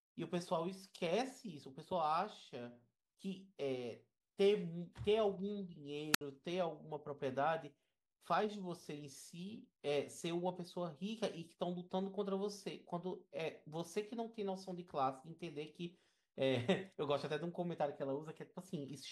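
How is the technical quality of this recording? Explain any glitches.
The recording has one glitch, a wireless microphone squelch dropout at 6.13 to 6.21 s. A short burst of static gives way to a hole of near silence lasting about 66 ms before the speech returns. The FM radio link faded, and the receiver's squelch muted the output until the signal recovered.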